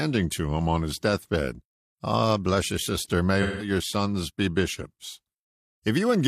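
A speech clip with AAC frame loss with concealment from 3.42 to 3.70 s, between "bless you sister may" and "sons be bishops": about 170 ms of lost audio, consistent with four dropped frames, becomes a smeared, noisy patch. The decoder repeats the last good spectrum, which shows as blurred horizontal bands on a spectrogram.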